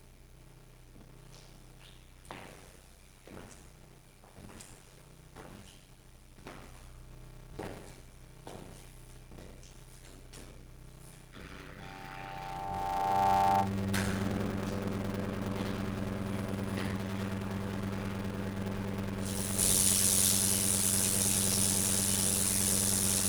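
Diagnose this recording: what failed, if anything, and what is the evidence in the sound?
Buffer stage: a block size mismatch (padded) zero-fills every block. This causes a steady 93.8 Hz buzz and 0.625× slowed playback at normal pitch, which fits a 512-sample read buffer. The waveform shows regular flat gaps, and the spectrogram shows vertical stripes.

Playback loop: a loudspeaker feedback squeal runs from 11.80 to 13.75 s. An 802 Hz tone swells over roughly a second to about 5 dB above the sound. It appears as a brightening horizontal spectrogram line.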